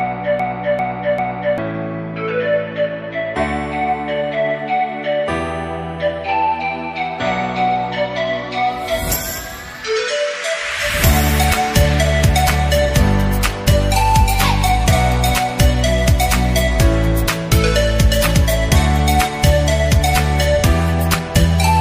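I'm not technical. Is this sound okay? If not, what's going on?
No. From the very start until about 1.58 s, the audio is caught in a broken-record loop: one short piece, about 0.39 s long, plays three times back to back, already looping when the clip begins. The likely cause is a player or stream that stalled and kept resending the last bit it held, so whatever belonged there is lost. Unlike an echo, each repeat is identical and equally loud, with no fading.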